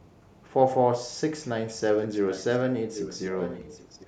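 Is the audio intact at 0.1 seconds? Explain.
Yes, the speech at 0.1 seconds plays through intact, with no dropout, click, distortion or other fault at that moment.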